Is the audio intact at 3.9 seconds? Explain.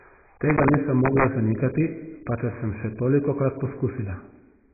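No. At 3.9 s the speech carries the same damage heard throughout, likely from AAC compression at a very low bitrate, which fits roughly 12 kbps. The encoder has discarded everything above 2.5 kHz and quantised the rest coarsely, so the sound is dull, muffled and smeared, with a warbling, fizzy edge. On a spectrogram the energy stops at a hard ceiling near 2.5 kHz, with patchy gaps below it.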